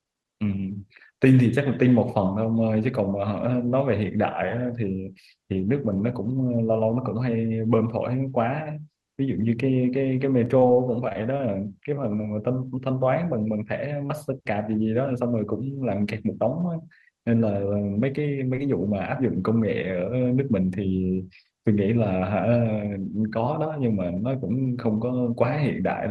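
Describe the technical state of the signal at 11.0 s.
At 11.0 s the speech sits inside a burst of repeated packet loss, running from 10.45 to 11.41 s. Six short gaps, the longest 23 ms, are patched by stretching the preceding sound. Speech turns choppy, with fragments missing.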